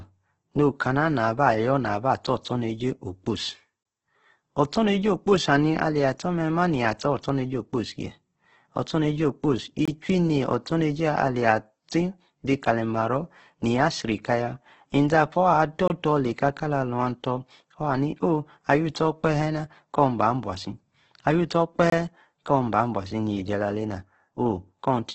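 Throughout, the speech sounds rough and grainy, with nothing above about 8.2 kHz. This is likely heavy Opus compression in its CELT music mode at around 12 kbps: starved bands are filled with noise rather than left empty, so it turns gritty instead of swirling like MP3.

At 3.83, 9.85, 15.88 and 21.90 s, a gap between chunks cuts in: a 23 ms hole of silence, recurring about every 6 s. Silence is inserted at each chunk join, but no audio is skipped, which distinguishes it from a dropout.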